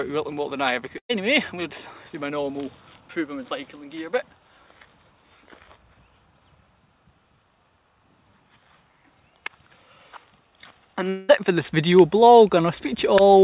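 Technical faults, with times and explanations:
0.98 to 1.11 s, burst of packet loss. Audio stopped arriving in time, and the receiver filled a 112 ms gap. It continued the last sound and turned it down. The fill fades quickly, and about 90 ms of it is silence. Playback then resumes about 120 ms further on, so that stretch of audio is missing. The held sound is band-limited like the rest of the clip, with nothing above 4 kHz, which fits a G.711 A-law call path at 64 kbps.
11.09 to 11.31 s, long network dropout. A 194 ms gap is filled with a continuation of the last sound that fades but never drops to silence. When the audio returns, it picks up about 200 ms further on, so that portion is gone. The cause is likely a longer network outage in which nothing arrived. The receiver kept concealing the gap instead of leaving it empty.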